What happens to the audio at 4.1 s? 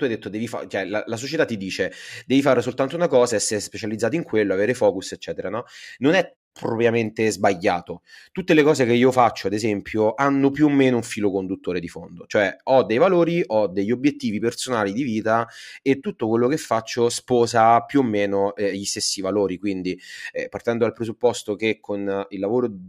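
Nothing goes wrong at 4.1 s: the speech carries on intact there, with no dropout, click or distortion.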